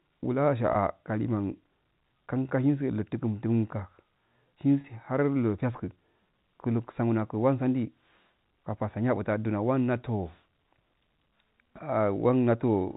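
At 0.73 to 0.75 s, about 20 ms of the speech drops out. At 4.81 to 4.84 s, about 30 ms goes. Both are packet loss with pitch repetition. The receiver fills each gap by repeating the last pitch period it received. The gaps are too short to fade into silence. Each one sounds like a brief held, buzzy smear in the speech. The lengths fit runs of 10 ms packets. The narrow G.711 telephone band stays audible throughout.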